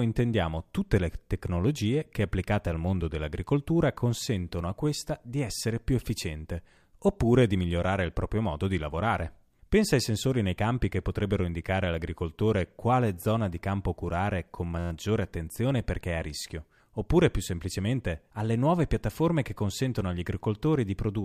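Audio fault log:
14.79–14.91 s, system hang loop: between "di campo curare con" and "attenzione perché è a", the machine or its audio driver stalled while the sound hardware kept replaying its ring buffer. A slice of about 11.6 ms, which fits a 512-sample buffer, repeats exactly ten times, so the speech gives way to a steady buzz at about 86 Hz, the loop rate. Little or no audio is lost.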